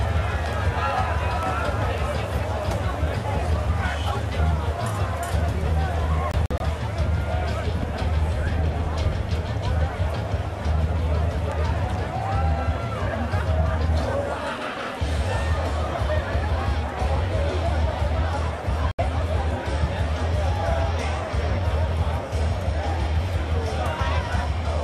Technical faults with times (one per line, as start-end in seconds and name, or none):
6.31-6.61 digital broadcast dropout
18.91-18.99 digital broadcast dropout